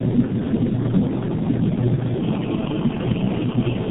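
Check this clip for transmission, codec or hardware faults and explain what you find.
Two faults run through the whole speech clip.

Filter restarted on every block, throughout: a filter in the chain loses its state at each block boundary and restarts from silence, so each block opens with a small transient. The result is a buzz at 375 Hz that rises and falls with the speech level, which fits a 128-sample block.

Tandem speech coding, throughout: the speech sounds rough, muffled and warbly, with nothing above 3.8 kHz. This points to three low-rate speech codecs in series, ending in G.723.1. Each one re-encodes the previous codec's already degraded output, so the errors pile up.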